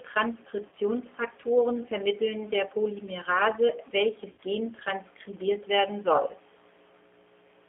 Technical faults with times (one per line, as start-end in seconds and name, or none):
0.00-7.69 mains hum
0.00-7.69 G.729 codec
0.69-0.75 VoIP packet loss concealed by the speech codec
4.32-4.43 VoIP packet loss concealed by the speech codec